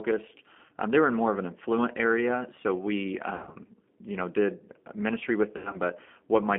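The whole clip runs through a G.729 codec. The speech is squeezed into a phone band of roughly 200 Hz to 3.4 kHz. Nothing bright survives above that. The coder models the voice with a vocal tract filter, a pitch predictor and a few pulses per frame. That leaves a plainly audible rough, slightly synthetic edge. The thin, coarse texture fits an 8 kbit/s G.729A coder.

The first VoIP packet loss concealed by the speech codec comes at 0.67 to 0.71 s. About 20 ms is missing, which fits a single lost packet. The decoder fills the hole by repeating its last pitch and filter. At 3.35 to 3.56 s, 140 ms is lost in bursts scattered over 200 ms, the longest 60 ms. The voice is stretched into a buzzy tone or coloured noise that fades, then stays weak as frames rebuild. At 5.57 to 5.77 s, 100 ms is lost over 160 ms, with an 80 ms run. It sounds similarly smeared and stretched.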